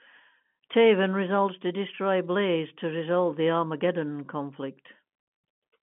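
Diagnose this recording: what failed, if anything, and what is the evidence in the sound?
Nothing failed in this recording.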